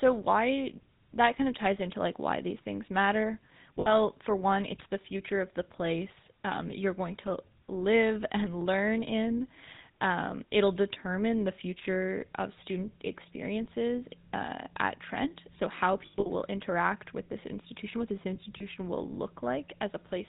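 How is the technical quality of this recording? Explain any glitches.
The recording is speech with plainly audible codec damage across the whole clip, plus three short dropouts.

GSM full-rate codec, throughout: the voice has a buzzy, gravelly roughness and nothing above 4 kHz. The codec models the vocal tract and drives it with sparse regular pulses, which fits a 13 kbps GSM full-rate link. Unlike generic band-limiting, it adds this grainy texture.

Lost GSM frames, at 3.8 to 3.94 s (after "why these things matter"), at 16.06 to 16.27 s (before "will interact with this"), and at 18.58 to 18.64 s (after "this institution what this"): when a frame is lost, the decoder reuses the settings of the last good frame, so the sound is held as a rough, metallic ring rather than dropping to silence or clicking. The first loss is about 60 ms. The second is about 160 ms, spread over 200 ms with a longest run of roughly 70 ms. 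The third is about 20 ms.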